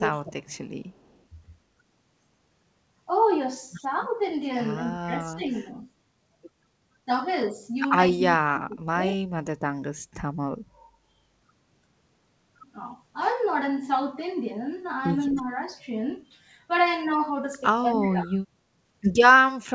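Right at the start, from 0 to 0.46 s, the voice dips by roughly 20 dB. That's speech suppressed in double talk, likely the echo canceller turning everything down while both ends talked at once. The same dipping returns at 5.06 to 5.68 s (shallow), 8.12 to 9.23 s (deepest, around 35 dB), 15.34 to 15.73 s (slight) and 17.82 to 18.41 s.

Between 0.89 and 1.23 s there's an echo leak: a faint copy trailing 263 ms behind the voice, about 40 dB down. It's likely loudspeaker pickup that the canceller didn't fully remove. It comes back louder, about 25 dB down, from 15.3 to 15.37 s.

All of it sits below 8 kHz, as expected through the G.722 call path.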